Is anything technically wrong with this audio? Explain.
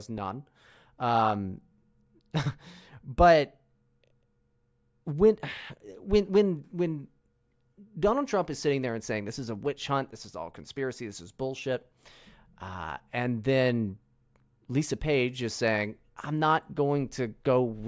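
No, nothing is technically wrong with this recording.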